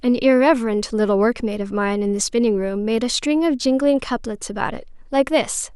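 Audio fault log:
No faults can be heard in this speech recording. There is nothing to log.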